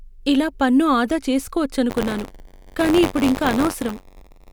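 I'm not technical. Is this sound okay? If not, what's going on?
No. Buffer tearing starts at 1.89 s and continues to the end. The program filling the sound buffer and the hardware reading it fall out of step, so small slices of slightly older audio get spliced in, causing a robotic buzz near 94 Hz, which fits a 512-sample buffer.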